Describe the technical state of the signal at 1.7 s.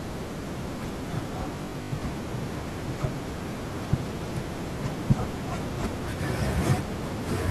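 At 1.7 s the speech has turned into a rigid, metallic buzz pitched at 50 Hz, lasting from 1.56 to 2.02 s: robotic sound from repeated short buffers. The likely cause is starved playback looping the last 20 ms, with about half the audio repeated rather than new.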